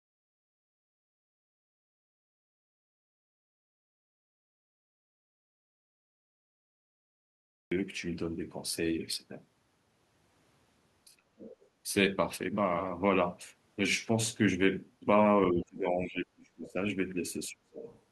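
The clip opens mid-way through an audio dropout to silence. The input was likely lost while the recorder went on writing silence, so from the start until 7.72 s there is silence with no room tone, and the speech then begins abruptly.

From 11.06 to 11.52 s comes speech suppressed in double talk. With both sides talking at once, the echo canceller likely could not tell its own talker from the loudspeaker echo and turned everything down. The voice dips by roughly 40 dB and nearly vanishes.

Right after, from 11.52 to 11.68 s, the other side's voice leaking through appears. Echo cancellation likely missed part of the loudspeaker signal, leaving a faint scrap of the far voice about 25 dB below the speech.

Suppression returns from 15.51 to 16.78 s, a dip of about 25 dB, and again from 17.49 to 17.85 s, about 30 dB down. The last leak, from 17.81 to 17.99 s, is brief, around 20 dB below the speech.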